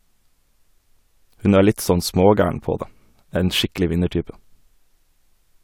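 Nothing in the speech here stands out as a technical fault; it runs along without any glitch worth pointing to.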